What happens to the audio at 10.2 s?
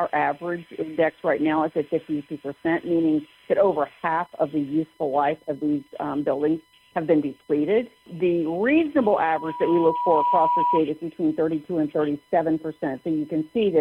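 At 10.2 s a microphone is picking up the loudspeaker it feeds, and the loop gain tops unity near 974 Hz. This loudspeaker feedback squeal runs from 8.97 to 10.80 s, swelling over about a second and a half into a piercing tone around 5 dB above the sound.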